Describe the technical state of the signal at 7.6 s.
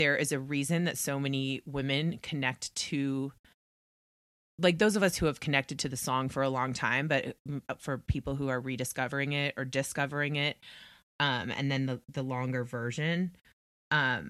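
The signal at 7.6 s is intact, with no dropout, distortion, glitch or other fault audible at that point in the speech.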